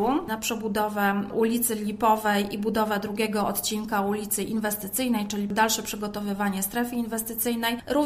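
No technical faults can be heard anywhere in the clip. Nothing in the audio breaks, drops out or changes character along the way.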